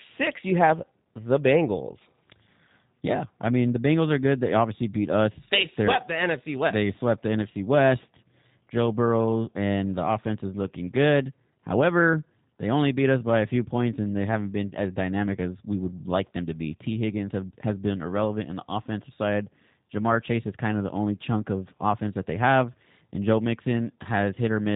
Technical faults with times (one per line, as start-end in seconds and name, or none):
0.00-24.76 G.729 codec